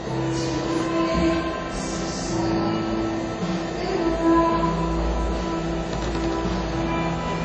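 Throughout, the everyday sounds stop at 10 kHz, leaving a flat ceiling on the spectrogram, and they sound dull. This is likely low-bitrate audio saved at a high bitrate. An earlier coarse encode, fitting 32 kbit/s WMA, removed that detail, and the later high-bitrate MP3 cannot restore it.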